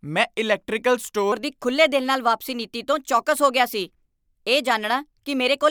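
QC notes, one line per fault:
1.32 to 5.70 s, section at the wrong speed: right after "ਮੈਂ ਇਲੈਕਟ੍ਰੀਕਲ" the speech jumps to 1.18 times its proper rate and stays there to the end, so syllables arrive hurried and the voice rises by roughly three semitones at the same instant. The likely cause is this stretch being played against the wrong clock. Because tempo and pitch move together, it is not a pitch-shift or time-stretch effect, which would alter one while leaving the other intact.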